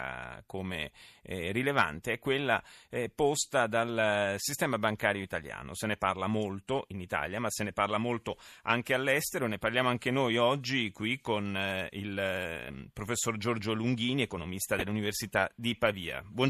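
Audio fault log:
14.79–14.82 s corrupt frame decoded: damaged bits in a few compressed frames were played anyway, throwing energy to the wrong frequencies as a brief chirp, squeak, blip or burst of noise peaking around -20 dBFS.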